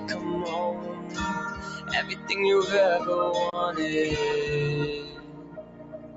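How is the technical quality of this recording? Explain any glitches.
The recording is compromised by a speech-oriented noise suppressor acting on sound it was not designed for. The audio is also band-limited at 8 kHz by the call path, which is expected for that route.

Noise suppressor applied to music or sounds, throughout: The suppressor treats steady, sustained content and ambience as noise and keeps pulling the gain down. Its attenuation swings by roughly 15 dB as it decides what to keep. Transients slip through while held material and decays sink, so the level pumps and flutters and the sound thins out rather than sitting steady.

Sound cut by the noise suppressor, at 0.0–0.24 s, 0.74–1.18 s, 2.09–2.28 s, and from 5.03 s to the end: In these stretches the suppressor misreads the sound itself as noise and clamps it harder than its surroundings, by about 5 dB in the first event and about 7 dB in the others. 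Sustained and fading parts dip, with tails cut short, while any sharp onsets remain comparatively intact. The closing segment is the longest of these.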